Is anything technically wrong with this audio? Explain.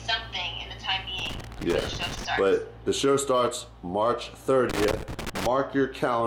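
Yes. Loose connector crackle appears twice, from 1.19 to 2.25 s and from 4.70 to 5.46 s. A worn or dirty contact keeps making and breaking as it shifts, chopping the signal and adding pops from any DC on the line, heard as irregular bursts of crackle and scratching.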